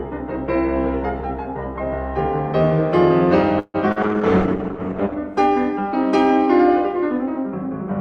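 A call audio freeze interrupts the music from 3.59 to 3.76 s. The last sound before the gap keeps going as a fading buzz or hiss for about a tenth of a second, then there are about 40 ms of silence. The music resumes exactly where it stopped, with nothing lost, but now runs about 146 ms later than before. This is likely packets stalling in transit until the jitter buffer ran dry and the receiver had to improvise.

A short concealed packet loss follows from 3.92 to 3.98 s. About 40 ms of audio never reached the decoder in time, so the receiver extrapolated from the preceding sound for roughly 39 ms and then crossfaded back into the real stream. The result is a brief smear or wobble in the music rather than a clean dropout, because that short stretch is synthetic continuation instead of the original signal.

A call bitrate drop begins at 4.03 s and lasts until 5.22 s. The encoder's rate falls from 48 to 10 kbps and stays at that floor for about 1.1 s. 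At this rate Opus quantises much more coarsely and narrows the audio band from 20 kHz to 8 kHz, so the music loses its top-end sparkle and takes on a dull, watery, rough quality until the rate climbs back.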